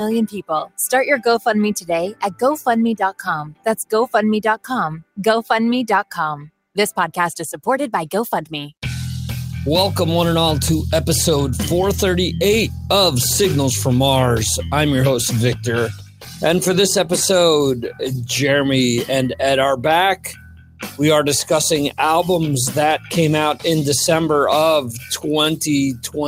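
A noise suppressor applied to music or sounds runs through the whole clip. Built for speech, it treats steady tones, ambience and decay as noise, so the level swings by around 10 dB: attacks pass while sustained sound sinks, giving a pumping, thinning quality.

Sound cut by the noise suppressor occurs at 0.27–0.78 s, 1.81–5.2 s, 6.44–6.77 s, 15.55–16.43 s, 17.75–18.3 s, 19.32–23.65 s and from 24.81 s to the end. Within these spans the suppressor judges held or fading material to be noise and pulls it down by as much as about 17 to 21 dB, so tails are clipped short and sustained passages dip sharply. Only part of each longer span is affected, roughly a second or more in the 1.81 s and 19.32 s stretches.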